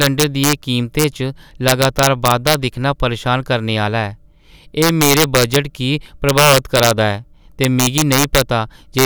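Integer overflow hits the speech at 0.02–0.53 s, 0.99–1.04 s, 1.68–2.54 s (just before "दिक्खना परेशान करने"), 4.82–5.56 s, 6.29–6.91 s, 7.64–8.41 s and 8.99–9.05 s. Peaks run about 1 to 6 dB past the integer ceiling and, instead of being limited, wrap to the opposite sign, swinging across the full range. The result is violent cracks on the loud passages, far harsher than clipping.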